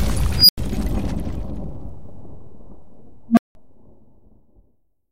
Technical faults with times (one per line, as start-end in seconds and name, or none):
0.35-0.58 unstable filter
3.29-3.55 unstable filter